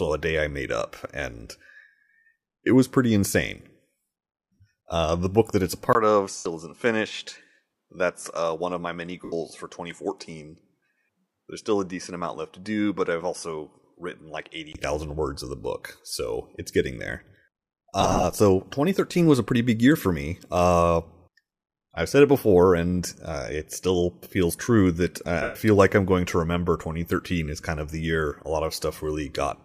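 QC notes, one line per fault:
Throughout, sample clock jitter: a faint hiss and roughness riding on louder, brighter speech, around 50 dB below the signal, with a noise floor on the spectrogram that rises with level and vanishes in pauses.
4.54 to 25.55 s, lost LE Audio frames at 4.54–4.59 s (52.5 ms), 6.37–6.46 s (82.5 ms), 9.25–9.33 s (75 ms), 18.01–18.24 s (120 ms scattered over 225 ms, runs up to about 30 ms) and 25.42–25.55 s (127.5 ms): a repeated spectrum with random signs smears the speech into noise before fading, showing as blurred vertical bands and a decaying envelope.
5.93 to 14.75 s, input switched to a poorer device: the sound abruptly turns duller and about 5 dB quieter after a 20 ms gap, with nothing above 11.4 kHz and new background noise about 55 dB down. A likely change of microphone shows as a hard spectral ceiling, a notch in the waveform and a lower envelope.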